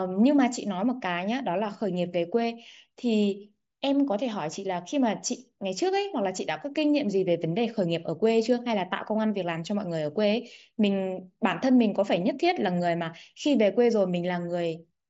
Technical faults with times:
4.29 concealed Bluetooth headset packet loss

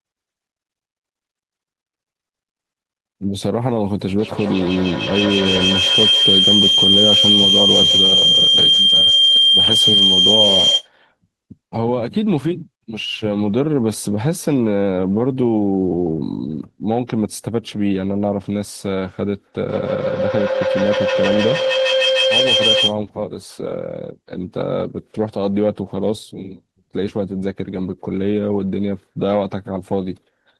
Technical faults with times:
4.18-10.91 feedback howl
19.66-23.01 feedback howl

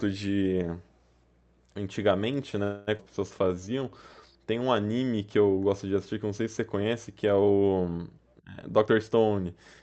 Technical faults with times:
2.63-2.89 call audio freeze
2.97-3.01 skip ahead
3.39-4.34 jitter buffer slow-down
8.62-9.82 jitter buffer speed-up

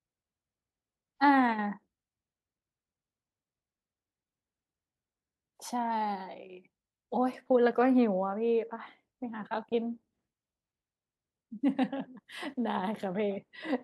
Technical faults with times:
5.25-5.42 repeated frames

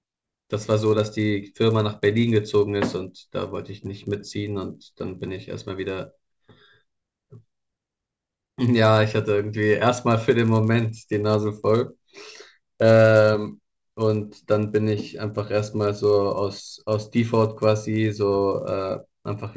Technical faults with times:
0.00-19.57 resampler restarted on every block

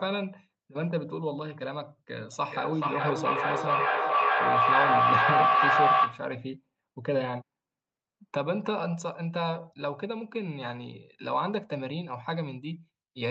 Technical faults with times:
2.32-6.38 feedback echo between two devices

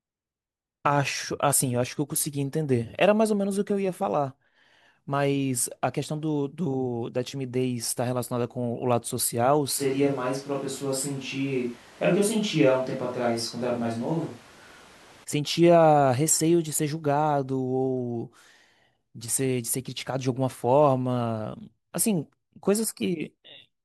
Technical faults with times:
9.80-15.23 switch to a distant microphone

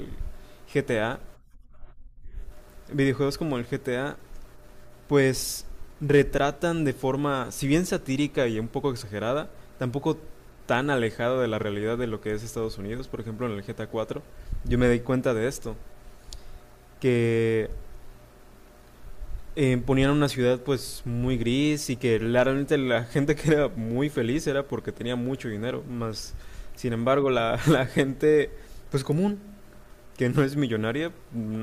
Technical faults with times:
none

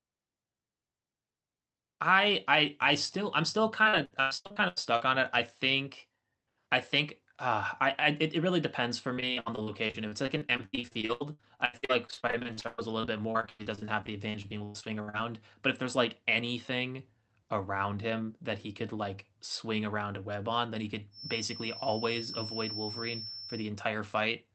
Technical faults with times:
3.83-5.02 repeated packet loss (robotic sound)
9.14-15.15 repeated packet loss (robotic sound)
21.10-23.72 feedback whistle

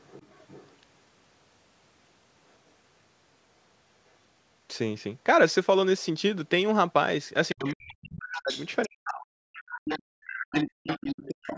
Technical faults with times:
0.00-0.76 other side's voice leaking through
7.49-8.04 other side's voice leaking through
7.53-9.35 speech suppressed in double talk
8.36-8.86 other side's voice leaking through
9.54-11.31 other side's voice leaking through
10.34-11.57 speech suppressed in double talk

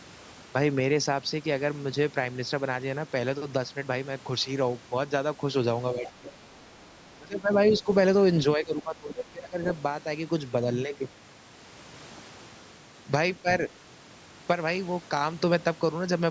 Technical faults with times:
5.93-6.30 speech suppressed in double talk
6.06-6.12 other side's voice leaking through
6.57-6.88 other side's voice leaking through
7.17-7.88 speech suppressed in double talk
8.56-9.66 speech suppressed in double talk
13.42-13.47 speech suppressed in double talk

